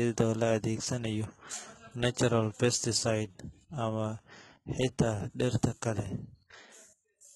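Throughout the speech, the sibilants sound gritty and metallic, s sounds come out lispy, and the upper range has a synthetic sheen, with nothing at all above about 11.8 kHz. This is likely HE-AAC compression at a very low rate, consistent with roughly 16 kbps. The codec encodes only the lower band and fakes the treble by copying lower bands upward under a coarse envelope, so the rebuilt harmonics fail to line up across the crossover, and the damage here is heavy.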